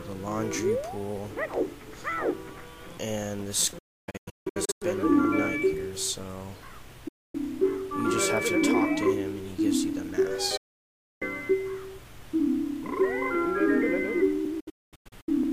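A digital broadcast dropout mutes the sound at 3.78 to 4.82 s in several short holes, at 7.08 to 7.35 s, at 10.57 to 11.22 s, and again in broken holes at 14.60 to 15.32 s. Each gap fades within 8 ms to clean silence rather than decaying into analogue hiss, since the receiver mutes failed frames until good ones return.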